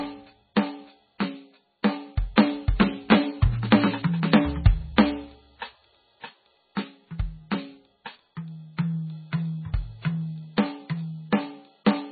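From the start the music shows heavy MP3 compression as the likely cause. Nothing survives above 4.6 kHz, and weak frequency lines drop in and out between frames, giving a watery, swirling texture and smeared attacks, consistent with a very low bitrate near 16 kbps.

Pre-echo appears at 1.83 s and again at 2.36 s. In each case a sharp attack sat late in a transform block, so quantisation noise spread backwards by about 13 ms and 17 ms respectively, heard as a brief hiss just before a softened onset.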